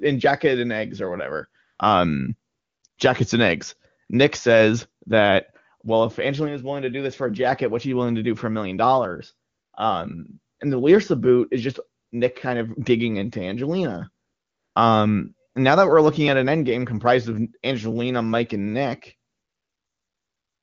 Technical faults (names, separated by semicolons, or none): AMR comfort noise